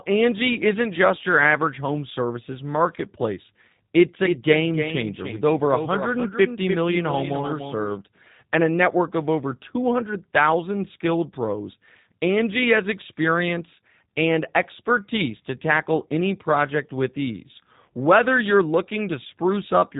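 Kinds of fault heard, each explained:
G.729 codec: the speech is rebuilt from a vocal-tract model and sparse pulses, so it sounds plainly rough and synthetic, consistent with 8 kbit/s, with nothing above 3.8 kHz.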